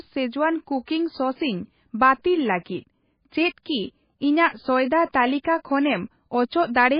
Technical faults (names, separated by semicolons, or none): MP3 compression